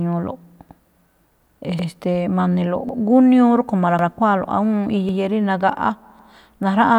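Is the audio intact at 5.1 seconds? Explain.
No. From 5.09 to 5.19 s a 100 ms stretch of the speech plays twice, giving a brief stutter or click at the join. This is overlapping chunks: the audio was handled in 1.0 s pieces, and the next piece began before the previous one ended.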